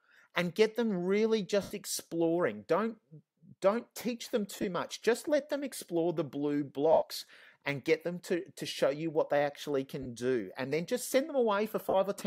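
Five short bursts of lost LE Audio frames break up the sound at 1.62–1.71 s, 4.56–4.64 s (scattered, longest gap about 20 ms), 6.93–7.02 s, 10.03–10.06 s and 11.89–11.94 s. Rather than true silence or clicks, each gap is filled by the LC3 decoder's concealment, a sign-randomised repeat of the last spectrum that smears tones into brief noise. Gap lengths fit 7.5 ms frames.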